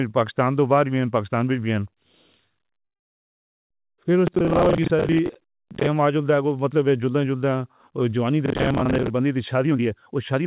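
From 2.84 to 3.74 s the speech stops abruptly. A very short tail of the last sound carries on, then about 0.83 s of silence. When it resumes, the speech picks up exactly where it left off, with nothing lost but everything after it arriving roughly 0.87 s late. This is a call audio freeze. The likely cause is packets held up in transit, leaving the jitter buffer empty, so the receiver had nothing to play until they arrived.

Between 4.27 and 5.87 s, and again from 8.46 to 9.10 s, a gritty, tearing crackle rides on top of the speech and then clears. This is processor overload crackle. The processor repeatedly failed to finish its audio buffers in time. The short chunks and the crackle's fine grain suggest buffers of around 10 ms, with dozens missed in a row during the first stretch and fewer in the second. Each missed buffer was filled with a hard-edged fragment of old audio, and together these fragments form the crackle.

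From 9.56 to 10.45 s the speech sounds hurried, running at about 136% of normal speed while its pitch stays the same. This is a jitter buffer speed-up. The buffer held more audio than its target, so the receiver trimmed many short pitch-period pieces, about 0.3 s in total, to bring the delay back down. Throughout, the G.711 A-law call path leaves nothing above 4 kHz.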